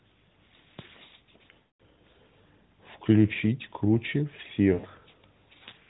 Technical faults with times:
1.60-1.81 lost AMR speech frames
4.74-4.86 lost AMR speech frames

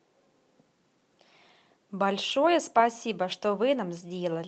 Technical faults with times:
2.31-2.33 lost packet rebuilt from error correction
3.31-3.33 lost packet rebuilt from error correction

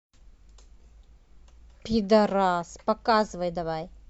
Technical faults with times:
none

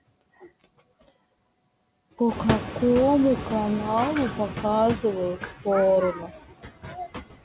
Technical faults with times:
0.00-7.45 noise suppressor artifacts
2.28-4.71 noise suppressor catching up
6.13-7.11 speech cut by the noise suppressor

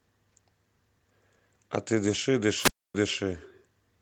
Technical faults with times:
2.58-2.95 wireless microphone squelch dropout

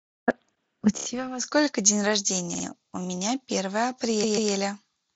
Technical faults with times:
0.97-1.05 repeated frames
2.54-2.64 repeated frames
4.23-4.51 repeated frames

